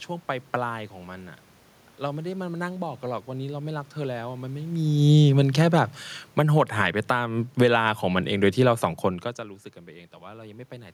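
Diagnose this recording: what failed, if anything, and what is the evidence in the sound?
Call processing is at fault, with automatic gain falling. From 4.67 s to 7.81 s the level sinks by about 11 dB. The room noise sinks with it. The gain control judged the input too loud, or its background noise too strong, and lowered its gain gradually.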